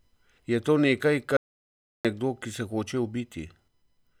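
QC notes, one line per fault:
1.37–2.05 s, audio dropout to silence. The speech cuts off mid-flow and about 0.68 s of silence follows. No room tone or noise floor remains in the gap, so the input itself vanished rather than the level dropping. Speech resumes abruptly with "nekdo ki se". The likely cause is a brief loss of input, such as a disconnected device, failed link or stray mute, while the recorder kept writing silence. Whatever was spoken in the gap is lost.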